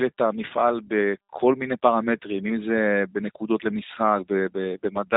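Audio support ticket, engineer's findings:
G.729 codec damage, plainly audible across the whole speech clip. Band-limited, nothing above about 3.8 kHz; speech slightly rough and synthetic. Probable component: G.729A encode/decode in the VoIP path. Fits an 8 kbit/s codec rebuilding each 10 ms frame from a vocal-tract filter, pitch predictor and sparse pulses, discarding fine detail and upper band.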